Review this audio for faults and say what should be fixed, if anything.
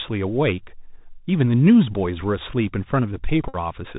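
Bluetooth CVSD headset codec, throughout: the speech is band-limited with nothing above 4 kHz, and the damage is plainly audible. This fits a 64 kbps CVSD link, where one up-or-down bit per sample with an adapting step cannot track fast, bright sounds, so sibilants turn scratchy over a granular hiss. Prevent it by recording through a wideband path, such as a wired microphone or a headset using the mSBC wideband mode.

Bluetooth headset packet repeated, 3.48 to 3.56 s: a steady buzz near 267 Hz replaces the speech for that stretch. After voice packets were lost, the chip kept re-decoding the last good packet every 3.75 ms, covering about 52.5 ms of missing audio. Prevent it by keeping the headset close to the phone and away from Wi-Fi or other 2.4 GHz interference.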